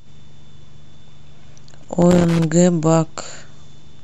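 A worn or dirty contact in the signal chain is making and breaking as it moves, so this speech recording carries loose connector crackle from 1.82 to 2.44 s: the signal is repeatedly chopped, and the interruptions come through as an irregular burst of scratchy crackle.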